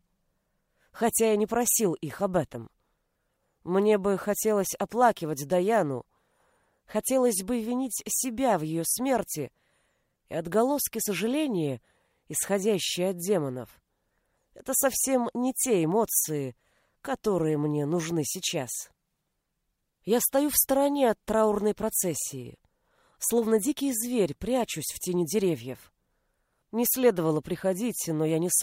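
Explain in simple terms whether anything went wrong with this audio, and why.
Nothing went wrong; no faults can be heard.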